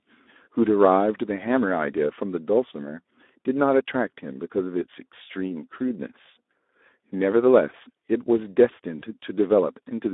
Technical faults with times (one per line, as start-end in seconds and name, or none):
0.00-10.13 Speex codec
8.99-9.05 VoIP packet loss concealed by the speech codec